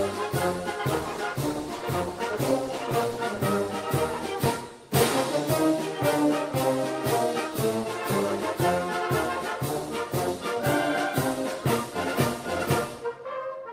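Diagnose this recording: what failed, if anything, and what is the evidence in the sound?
A call bitrate drop is the failure, sitting at the network-to-codec boundary. From 0.84 s to 3.29 s the audio turns coarser and duller, with a watery roughness and lost top end that lasts about 2.4 s at its worst before clarity returns. That fits a fall from around 48 kbps to 18 kbps: the bandwidth estimate collapsed, the encoder was told to spend far fewer bits, and it quantised more coarsely and trimmed high frequencies until the rate recovered.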